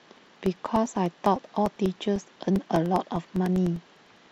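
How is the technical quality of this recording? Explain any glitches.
The recording is marred by periodic USB or driver dropouts throughout the speech. From 0.06 s to 4.27 s, about forty tiny gaps of roughly 2 ms each occur exactly every 0.1 s, where a background task stalls the audio path and the lost samples become silence. Each sounds like a tick heard only over speech. The strict ten-per-second spacing separates this from random network packet loss.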